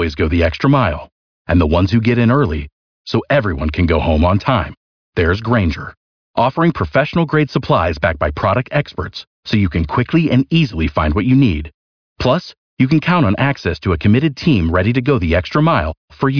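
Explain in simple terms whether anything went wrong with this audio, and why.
Nothing went wrong: the speech recording contains no audible technical faults.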